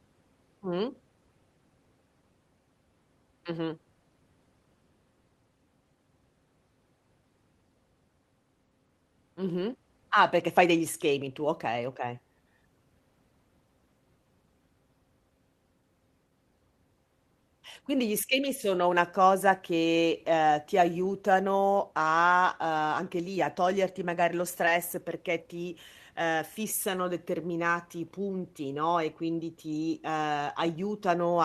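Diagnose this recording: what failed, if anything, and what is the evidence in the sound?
The network dropped audio packets, and you can hear short concealed packet loss at about 24.65 to 24.70 s, right after "a toglierti magari lo". There's a quick smear where the speech should carry straight on. About 20 ms of audio never arrived in time, so the receiver extended the last bit of sound for roughly 11 ms and crossfaded back into the real stream, leaving a few extra milliseconds of stretch in that spot.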